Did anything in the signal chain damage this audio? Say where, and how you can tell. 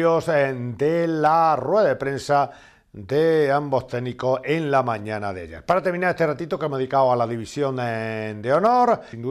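No, nothing in the chain audibly damaged this audio, with no dropouts, clicks, distortion or level jumps at any stage.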